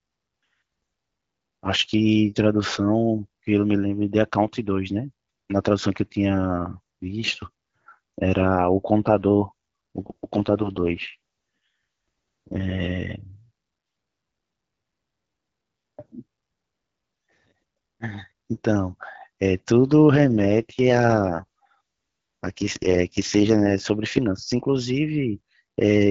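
AMR rate drops at 10.02 to 12.92 s and 20.17 to 23.74 s: the wideband speech turns rough and raspy, as if the network forced the HD Voice codec down from 12.65 to about 6.6 kbit/s to protect a weak link. Bandwidth holds, with no gaps, and clarity returns afterwards.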